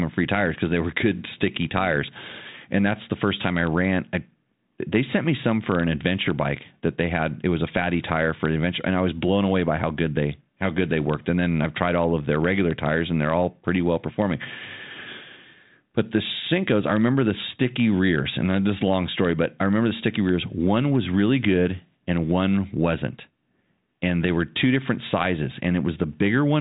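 The speech runs through G.726 ADPCM coding at 40 kbit/s, with nothing above about 3.8 kHz and at most a faint trace of the coder's level-following noise, and shows no technical fault.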